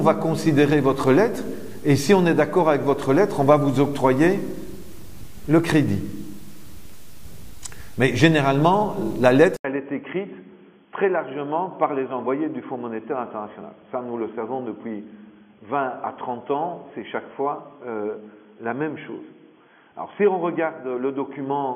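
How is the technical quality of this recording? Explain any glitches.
The first half is clean, but from 9.56 s on, after an 80 ms gap, the audio stops above 3.4 kHz, drops a few dB, and has a new noise floor well below the signal. That's likely the input switching to a poorer device.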